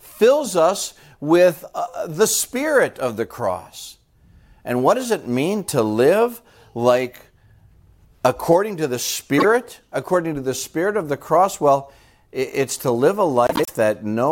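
At 9.38 to 9.45 s, and again at 13.47 to 13.69 s, the speech breaks into a brief garbled flutter: frames out of order. In each case two adjacent blocks were decoded swapped, the first of about 26 ms each, which fits single codec frames, the second of about 78 ms each. A spectrogram shows abrupt vertical seams where the harmonic contours jump back and forth, and the waveform shows discontinuities at each boundary. No time is lost.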